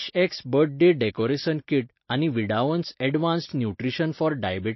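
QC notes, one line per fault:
throughout: MP3 compression. Nothing remains above 5.8 kHz, so the speech sounds dull. Codec damage is plainly audible as a watery, swirling texture. Weak frequency lines drop in and out between frames. The likely cause is MP3 encoding at a bitrate near 28 kbps.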